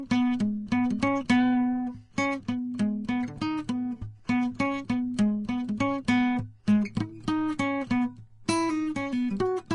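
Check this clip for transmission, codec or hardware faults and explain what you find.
One fault runs through the whole music clip: Vorbis compression. Nothing sounds above 10.6 kHz. The treble has turned hissy and grainy, tones sound roughened and attacks are blurred. This is likely a low-bitrate Vorbis encode, which fits about 32 kbps. The encoder lowered its cut-off and quantised the remaining high detail so coarsely that it became noise.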